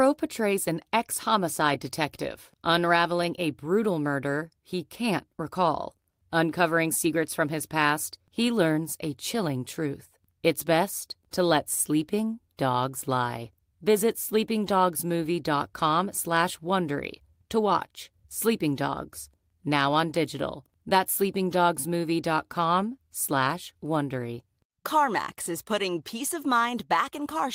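Nothing stood out on listening to this speech recording.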